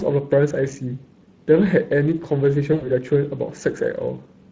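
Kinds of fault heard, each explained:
Speex codec: The speech throughout carries the plainly audible coarseness of the Speex CELP codec, at a quality that points to a bitrate around 20 kbps. The codec models each short frame with a vocal-tract filter plus a coded excitation, and with limited bits for that excitation the result is noisy and hoarse. This graininess sits on the voice for the whole clip rather than appearing in bursts.
VoIP packet loss concealed by the speech codec: From about 2.73 to 2.90 s, roughly 80 ms of audio is missing, which fits four lost 20 ms frames. The decoder fills the gap by extending its last pitch and filter while lowering the gain, so the voice smears into a buzzy or coloured, fading tone. Because each frame is built on the previous one, the voice stays weakened and distorted briefly after packets resume.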